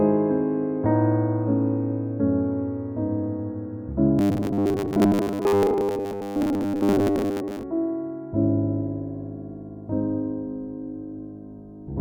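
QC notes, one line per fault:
4.19–7.63 s, robotic sound from repeated short buffers: the sound collapses into a rigid metallic buzz pitched at 100 Hz that still tracks the rough shape of the material, likely because new audio arrived too seldom and a roughly 10 ms slice was looped to fill the gaps, replacing most of the real signal. A steady buzz at a fixed pitch sets it apart from dropouts or clicks, which leave silences or isolated ticks.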